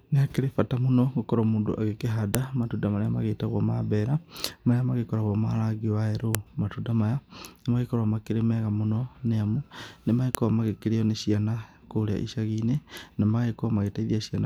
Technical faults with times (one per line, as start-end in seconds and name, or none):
2.35 file header played as audio
6.35 file header played as audio
10.35 file header played as audio